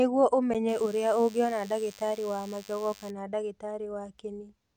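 A block of digital silence at 0.54 s breaks into this speech recording: for about 10.7 ms the signal drops straight out and returns with no fade, and the gap sounds like a short tick. The length fits a 512-sample buffer that was not filled in time. DECT cordless phone buzz runs from 0.68 s to 3.10 s, a thin 100 Hz buzz rich in harmonics sitting about 25 dB below the speech, produced when the audio circuitry rectifies the radio bursts a nearby DECT handset or base sends every 10 ms.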